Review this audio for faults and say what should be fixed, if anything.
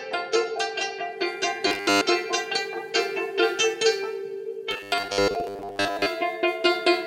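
Robotic sound from repeated short buffers at 1.67–2.03 s and 4.71–6.06 s. The music turns into a rigid 100 Hz buzz, likely from a 10 ms buffer replayed while most new audio is skipped. Fix this by keeping the audio feed steady so the playback buffer never runs dry.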